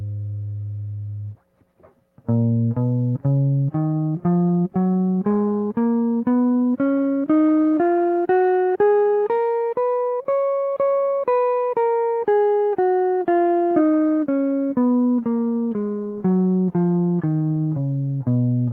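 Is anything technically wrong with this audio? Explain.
No, nothing technically wrong turns up in this music clip.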